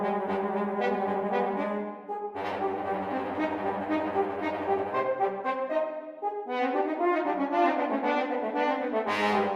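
No technical faults can be heard anywhere in the audio, and the signal stays steady and intact throughout.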